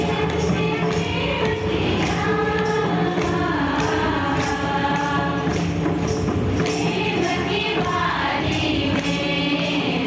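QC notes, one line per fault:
Throughout: gain pumping. The gain swings by roughly 10 dB, so loud and soft passages sit unnaturally close in level and the dynamics feel squashed. The likely cause is input gain set far too high, with a fast limiter or compressor clamping down on every peak and releasing between them. The call path's band limit, with nothing above 8 kHz, fits a G.722 codec at 64 kbps.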